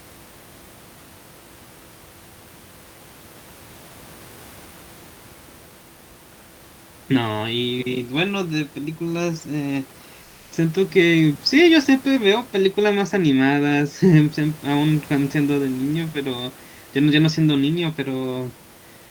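From 10.23 to 10.51 s the background becomes a flat, featureless hiss about 2 dB quieter. This is comfort noise in place of the background, likely from discontinuous transmission.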